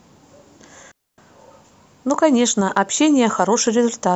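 At 0.92 s the speech drops into a digital wireless dropout lasting about 264 ms, until 1.18 s. The receiver lost too much of the radio data and muted itself with a quick fade, so you get a clean gap of near silence with no noise burst around it.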